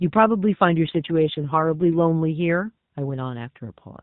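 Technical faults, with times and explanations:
0.79 to 2.01 s: AMR rate drop. A weak radio link forced the AMR-NB mobile codec to a lower speech rate, which fits a drop from 12.2 to 5.9 kbps with the freed bits spent on error protection. The speech turns rougher and more synthetic, with no gap and no change in band, until the rate recovers.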